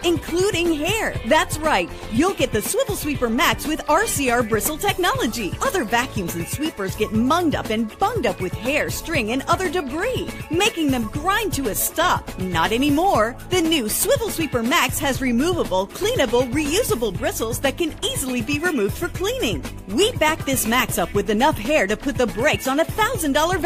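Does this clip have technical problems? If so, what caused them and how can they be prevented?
No, nothing in this one stands out as a technical problem, so there's nothing here that needs preventing.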